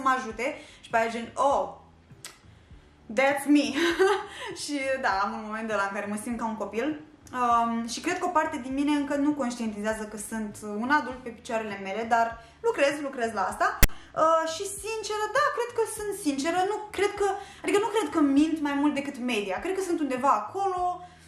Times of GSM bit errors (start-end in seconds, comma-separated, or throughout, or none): none